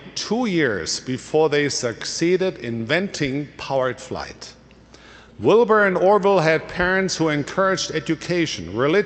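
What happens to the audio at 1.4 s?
Nothing goes wrong at 1.4 s: the audio passes through intact, carrying only the steady band limit near 8 kHz and usual coding texture of the Opus call path that runs throughout.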